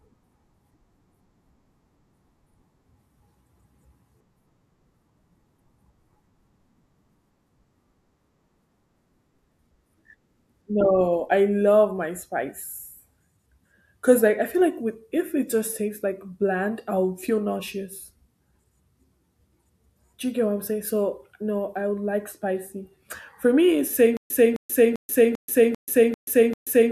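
The playback likely stalled at 24.17 s, just after "me it's", replaying its last buffered fragment on each retry and then running dry. The result is a stutter with silent gaps that lasts to the end of the speech clip: a 260 ms burst repeats seven times at an even 394 ms period, each separated by about 133 ms of dead digital silence. The speech that should have followed is lost.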